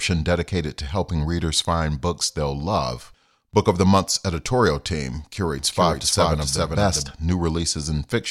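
A doubled audio track runs from 5.59 to 7.11 s in this speech recording, just after "editorial team": a dry full-band copy trails about 0.4 s behind, roughly 5 dB quieter, starting and stopping abruptly, likely from an edit holding two misaligned copies.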